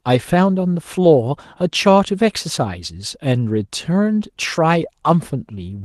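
At 1.03 to 1.05 s, a lost packet rebuilt from error correction: about 20 ms of speech, consistent with one packet, was replaced by the lower-bitrate copy carried in the next packet. There's no gap, only a brief rougher, noisier patch. A spectrogram shows a short smeared, grainier slice; the waveform stays continuous.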